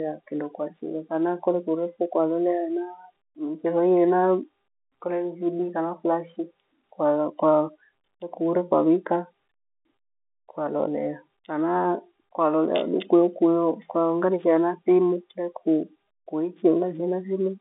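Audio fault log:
No faults detected.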